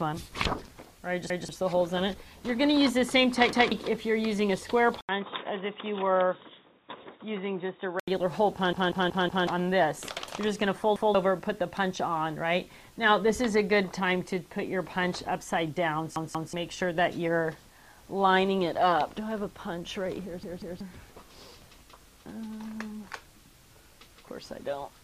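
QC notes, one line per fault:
1.30, 3.53, 8.73, 10.96, 16.16 and 20.43 s: repeated buffer. A chunk of about 186 ms, which fits an 8192-sample buffer, replays with hard joins. It plays twice at most points, three times at 16.16 and 20.43 s, and five times at 8.73 s, so roughly 0.2 to 0.7 s of new audio is lost.
5.01–8.08 s: input switched to a poorer device, likely. After an 80 ms gap the sound turns dull, with nothing above 3.8 kHz, drops about 5 dB and gains a noise floor about 45 dB down.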